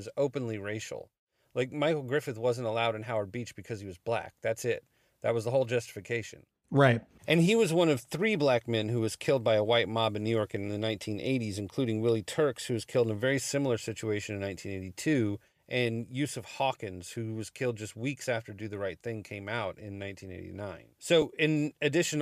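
At 21.22 s, lost LE Audio frames: a 7.5 ms gap, which fits one dropped frame, was concealed with a noisy, randomised copy of the preceding spectrum, leaving a brief grainy smear in the speech over the light coding texture, likely from LC3 compression.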